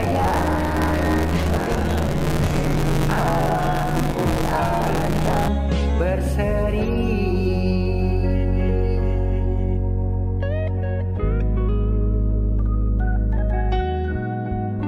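Buffer tearing from 0.0 to 5.49 s: the program writing the ring buffer and the hardware reading it have slipped and cross mid-period, so about half of each buffer holds audio around 20 ms old. The hard joins produce a robotic 86.1 Hz buzz, which fits a 512-sample buffer.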